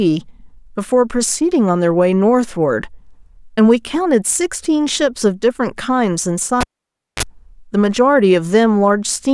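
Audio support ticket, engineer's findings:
Cable pulled and plugged in at 6.61 to 7.23 s. Pop at 6.61 s, then near silence for about 0.57 s. Brief 50 Hz mains buzz, about 31 ms, as the plug tip makes contact. Second pop on reconnection. Probable component: live interconnect or jack.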